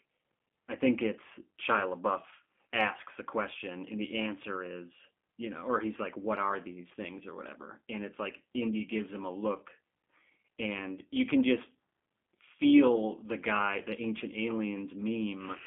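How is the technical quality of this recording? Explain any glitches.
The recording has been through a low-bitrate telephone codec for its full length, and the coding damage is plainly audible. Throughout, the G.729 codec rebuilds speech from a vocal tract model and sparse pulses, confining it to 200 Hz to 3.4 kHz and leaving it rough and synthetic, consistent with an 8 kbit/s link.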